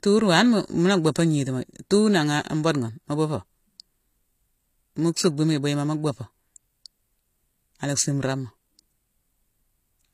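From start to finish the speech carries plainly audible coding damage. The top end stops dead at about 14.9 kHz, and the treble below that sounds bright but synthetic, with s sounds coming out gritty and lispy, as though the highs were pasted on from lower down. That's the signature of HE-AAC compression: the upper band is likely being rebuilt by spectral band replication rather than coded, and the damage fits a low bitrate of around 24 kbps.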